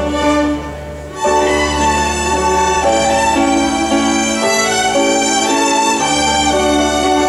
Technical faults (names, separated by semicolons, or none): none